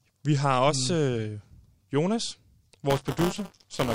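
From 2.90 s to the end, the speech carries buffer tearing: the writer and playback hardware have slipped, so a small slice of each 5 ms period, roughly a tenth, replays audio from about 20 ms earlier. The hard splices produce a rattling 200 Hz robotic buzz.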